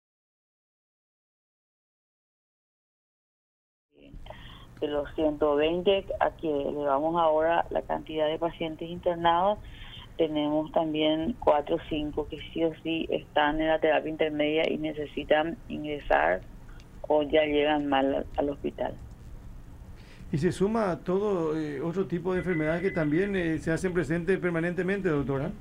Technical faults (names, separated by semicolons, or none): none